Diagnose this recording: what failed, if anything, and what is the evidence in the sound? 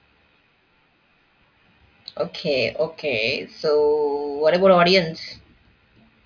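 Listening carefully to the speech, nothing stood out as a failure at any stage of the chain.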